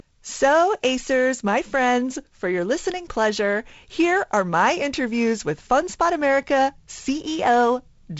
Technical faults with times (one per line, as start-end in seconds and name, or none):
none